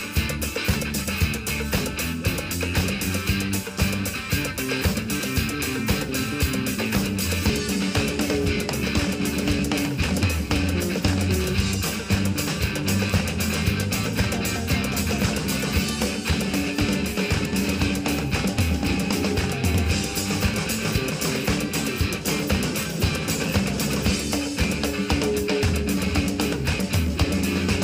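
There are three quick skips in the audio, at 7.50, 12.48 and 17.46 s, each dropping roughly 20 ms with the two sides butted straight together. Spaced about 5 s apart, they're likely audio missing between chunks, lost as one chunk closes and the next opens.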